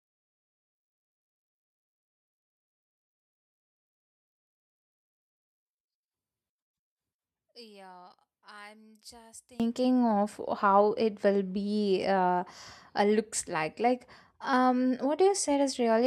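From the start to 9.60 s the speech sounds faint and distant, roughly 26 dB quieter when heard in mono. The likely cause is one channel inverted: with one side's polarity flipped, the centred voice and low end cancel on summing, leaving a faint residue of the channel difference. On a waveform the mono trace collapses to a low ripple, and the spectrogram shows faint energy until full level returns at 9.60 s.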